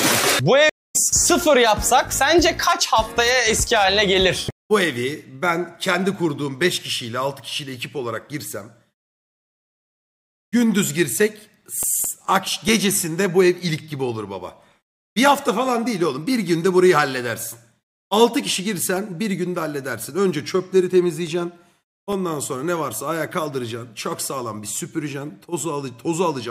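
At 0.69 s a stream reconnect cuts the audio to silence for about 0.22 s. The connection dropped and the player restarted a fresh decoder mid-stream, so when sound returns at 0.96 s it picks up roughly a fifth of a second later than where it stopped.

CD scratch ticks appear from 11.19 to 12.90 s and again from 21.06 to 22.77 s. Each burst has nine small ticks, about five per second, the longest only a few milliseconds. A scratch defeated the disc's error correction on each revolution, and the player interpolated or muted the damaged samples.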